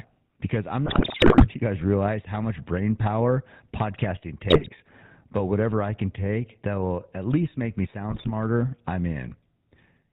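Throughout the speech, the GSM full-rate codec gives a buzzy, gravelly roughness, consistent with the 13 kbps full-rate coder. It rebuilds the voice from a vocal-tract filter driven by sparse, regularly spaced pulses. A spectrogram shows a hard ceiling at 4 kHz and coarse, smeared harmonics.

GSM bit errors strike from 0.86 to 1.46 s, after "because I'm" and before "you guys realize how". They strike again from 4.50 to 4.69 s, after "much brain power podcasting", and from 8.10 to 8.31 s, after "at least make me". Corrupted filter, pitch and gain values produce squawks, pops and gargling. These appear as frame-length level spikes on the waveform and as warped spectral blocks on the spectrogram.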